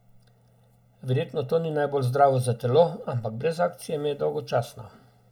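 One channel of this speech recording runs late by roughly one and a half milliseconds, and summing it to mono produces channel delay (comb filtering) throughout. Cancellation carves fixed notches starting near 300 Hz and repeating up the spectrum, leaving the voice hollow and phasey.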